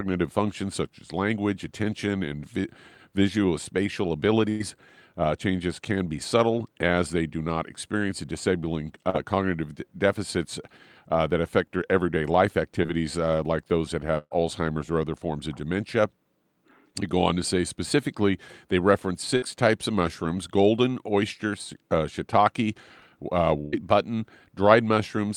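Burst of packet loss at 4.49 to 4.62 s: about 100 ms never arrived, so the decoder stretched the last sound into a fading buzz or hiss before resuming further on. Short concealed packet loss at 9.10 to 9.16 s and 12.83 to 12.86 s: a few tens of milliseconds were patched by extrapolation, heard as a brief smear or wobble. Further bursts of packet loss follow at 14.18 to 14.33 s (about 120 ms lost, ending in a short dropout of silence), 19.37 to 19.44 s (about 60 ms) and 23.60 to 23.75 s (about 120 ms), each a held, decaying fill with the audio in between skipped.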